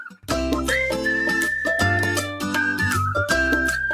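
Right at the start, from 0.08 to 0.28 s, there's sound cut by the noise suppressor: it misread that stretch as noise and pulled it down, by about 12 dB at the deepest point, so roughly a fifth of a second sags before levels recover.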